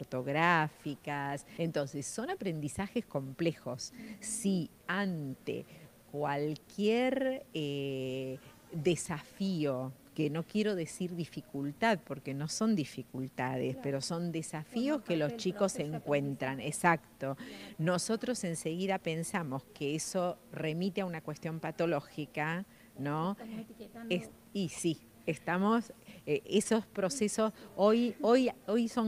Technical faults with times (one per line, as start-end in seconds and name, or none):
none